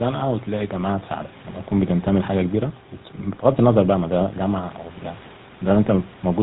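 From start to finish, the speech carries the sound of the GSM full-rate codec. The damage is plainly audible. This early phone codec rebuilds the voice from a vocal-tract model driven by a regular pulse train, and it keeps only a third of the excitation detail. The result is a buzzy, gravelly roughness in the voice. Nothing above 4 kHz survives, so the sound is dull and boxy. The coarseness fits a 13 kbps stream.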